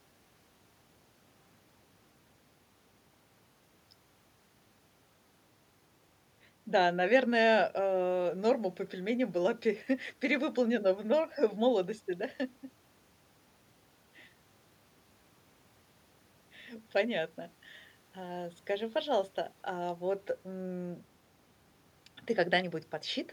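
A speech recording with nothing technically wrong with it.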